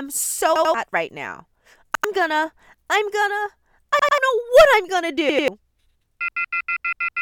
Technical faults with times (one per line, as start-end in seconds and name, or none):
0.56-0.74 repeated buffer
1.95-2.04 repeated buffer
3.99-4.18 repeated buffer
5.29-5.48 repeated buffer